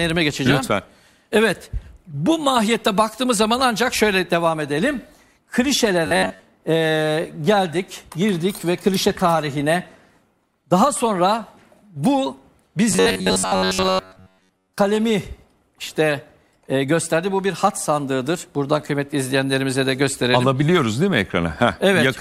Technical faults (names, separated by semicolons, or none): robotic sound from repeated short buffers